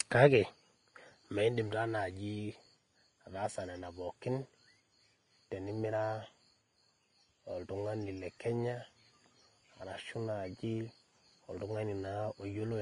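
Throughout, nothing sounds above about 10.6 kHz, and smeared, warbly artefacts sit under a second coarse layer. This likely comes from transcoding between lossy codecs, perhaps a low-rate Vorbis encode re-encoded as WMA.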